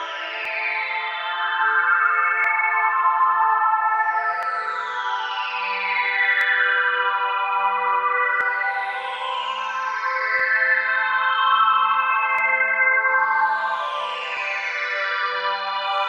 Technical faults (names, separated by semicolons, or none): overlap between stream segments